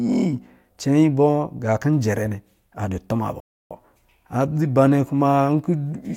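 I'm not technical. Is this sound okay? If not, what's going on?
No. At 3.40 s the speech cuts out completely and stays silent until about 3.71 s, a gap of roughly 0.3 seconds, before the sound carries on. This is a playback stall: the sound stops mid-flow instead of being faded or paused naturally. The likely cause is that the player briefly ran out of audio data to send out, or was held up by other work on the device, and produced silence until it caught up.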